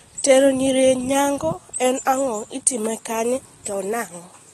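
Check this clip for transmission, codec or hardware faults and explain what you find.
One codec fault runs through the whole clip. The speech sounds dull and smeared, with nothing above 12.4 kHz, and sibilants and held vowels carry a plainly audible fizzy, warbling texture. This is AAC compression, likely AAC-LC at a low bitrate that fits 32 kbps. To save bits, the encoder drops the top of the spectrum and quantises what remains coarsely, leaving gaps that shift from frame to frame and produce the flutter.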